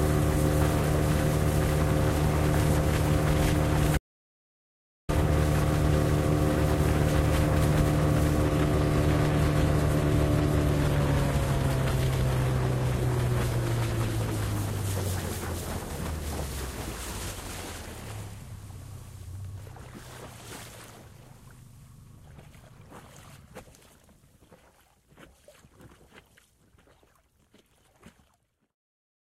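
At 3.98 s the sound just stops dead, and it doesn't come back until 5.09 s. That's an audio dropout to silence lasting about 1.1 s. The gap is silent with no background or room tone at all, so whatever was happening in those moments is simply gone. The likely cause is the input going missing for a moment, through a device losing connection, a link failing or an accidental mute, while the recorder kept writing silence.

A little later, from 8.50 s to 14.50 s, there's a sudden quality switch with no gap. This is the adaptive stream at a lower bitrate. The connection apparently slowed, so playback fell back to a cheaper version of the audio. The top end thins out, with nothing above 14.9 kHz, which points to a move from AAC-LC at 96 kbit/s down to HE-AAC at 24 kbit/s.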